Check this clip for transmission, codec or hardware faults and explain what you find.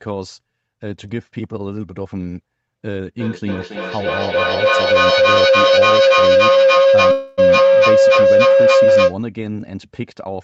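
Two faults stand out in this speech clip: a sustained feedback howl and a brief call audio freeze inside it.

Feedback howl, 3.2 to 9.22 s: the microphone and loudspeaker of two devices in one room form a loop that gains level each pass. Repeats build instead of dying away, narrowing to a tone around 500 Hz with a loop delay of roughly 300 ms, and the howl peaks about 13 dB above the speech.

Call audio freeze, 7.11 to 7.40 s: likely packets stalled and the jitter buffer ran dry. For 262 ms the receiver stretches the last sound into a fading fill, then resumes where it stopped, so the audio is delayed by that amount rather than losing any content.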